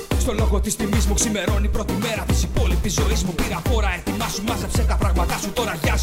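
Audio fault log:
No fault is heard anywhere in this audio.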